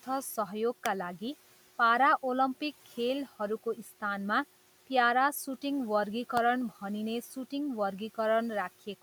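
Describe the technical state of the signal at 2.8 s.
At 2.8 s the signal is intact, with only the room's own background noise sitting about 26 dB below the speech.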